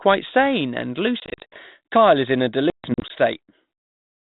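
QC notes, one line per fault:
1.20–1.58 s and 2.70–3.11 s, packet loss on an ADPCM call. After "sane and", 180 ms drops out in gaps across 320 ms, longest 60 ms. After "is in a", 220 ms across 400 ms, longest 140 ms. Silence fills each hole. The decoder's predictor and step size lose track, so audio resumes slightly distorted, then settles.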